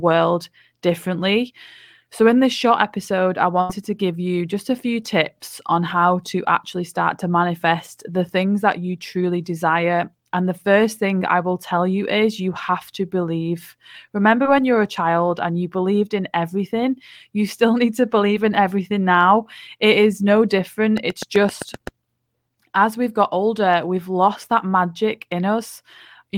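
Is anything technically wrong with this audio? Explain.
Yes, there are two faults.

At 3.61 to 3.70 s, after "this short episode I", there is a burst of packet loss. The sound is held on and fades as a buzz or hiss for about 77 ms, then resumes at "to give you just" with about 80 ms of speech missing. The receiver bridged the lost packets by extending the last sound.

From 20.97 to 21.88 s, just after "is no", a train of clicks ticks over the speech: around seven similar pulses at a regular 7.8 per second, about 10 dB above the speech. The likely cause is interference, a faulty connection or a power supply.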